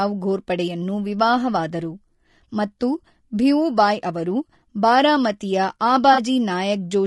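It's a speech clip, and the whole thing carries a rough, grainy quality that's most likely low-delay AAC compression, the AAC-ELD flavour used for video calls. At this low bitrate the coder can't spend enough bits on the pitch harmonics, so noise fills the gaps between them and the top band sounds thin and a bit synthetic. The level of damage is plainly audible and fits a bitrate around 32 kbps. Then from about 6.13 to 6.19 s there's a brief smeared, noisy patch where the sound goes briefly phasey. That's AAC frame loss with concealment: roughly 40 ms of audio went missing, which fits a couple of lost frames, and the decoder patched the hole by reusing the last good spectrum with scrambled signs or interpolated energy. The gap was short, so it smears rather than dropping to silence.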